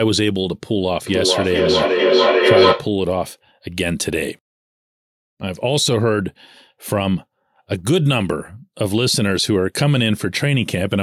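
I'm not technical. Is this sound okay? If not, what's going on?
No. From 1.07 to 2.96 seconds the speech comes back at itself, each bit repeating roughly every 0.4 seconds and sounding thinner and more metallic each time. The repeats pile up rather than fading, until they get louder than the speech itself. This is feedback echo between two devices: two devices in the same room are on the same call, and each one's microphone picks up the other's loudspeaker. Each device's echo cancelling only removes its own playback, so the sound keeps going round the loop.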